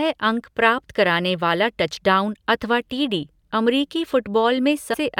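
Speech, with a brief burst of damaged data in a compressed stream from 4.93 to 4.95 s, about 20 ms near the very end. Corrupted bytes in the encoded stream leave the decoder misreading or discarding those frames, so it loses sync and has to hunt for the next valid frame header. The result is a short chirp or blip. On a spectrogram it shows as a thin vertical break. The waveform shows an irregular glitch.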